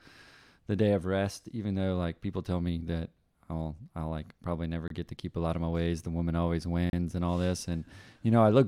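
A speech clip with two gaps between stream segments. Hard-edged silences cut in at 4.88 s for about 24 ms and at 6.90 s for about 31 ms. Segment timestamps leave holes that the player fills with silence. The 1 s segments lose no audio.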